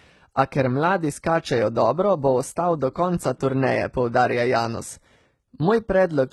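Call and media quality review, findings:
HE-AAC compression, throughout. Likely a very low-bitrate HE-AAC v2 path, consistent with about 16 kbps. Treble rebuilt from copied lower bands. Harmonics misaligned above the crossover; speech sibilants gritty, metallic, lispy. Heavy codec damage.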